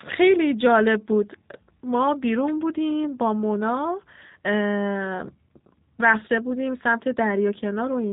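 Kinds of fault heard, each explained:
G.729 codec: The speech has been squeezed through a low-rate VoIP codec that discards the waveform and rebuilds each short frame from a vocal tract filter, a pitch predictor and a handful of pulses, with a character that fits 8 kbit/s G.729. Everything above 3.8 kHz is gone, leaving a narrow telephone tone, and the reconstruction is plainly audible as a rough, slightly synthetic buzz throughout the clip.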